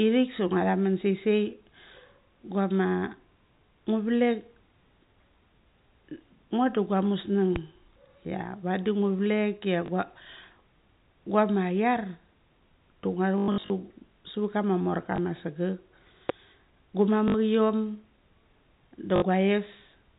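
The network dropped packets on this telephone speech recording, and the receiver filled each gap by replaying the last packet it had received: packet loss with last packet repeated. Short single drops occur at 9.86–9.88 s and 15.16–15.18 s, and 60 ms losses occur at 17.28–17.34 s and 19.16–19.22 s. The worst stretch runs from 13.38 to 13.70 s. There, 240 ms of losses are scattered across 320 ms, with the longest run lasting 100 ms. The repeating turns into a robotic stutter with a 50 Hz buzz, which fits 20 ms packets. Two loud pops also cut sharply through the speech, at 7.56–7.59 s and 16.29–16.32 s. Each is a single hard click well above the speech level, and the second is the stronger of the two. The speech carries on underneath both. A sudden voltage pulse in the chain, such as from a switch or a driver glitch, is the likely cause. The G.711 telephone coding keeps everything below 4 kHz.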